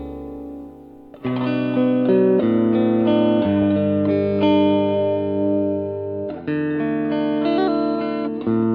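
The music signal holds steady throughout, with level, timing and continuity intact and nothing in the reproduction chain audibly interfering with it.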